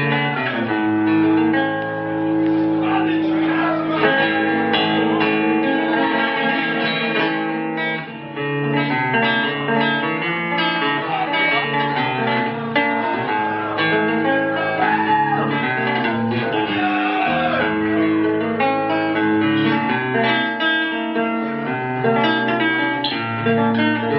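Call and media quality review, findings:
No faults found. Nothing to escalate on this clip.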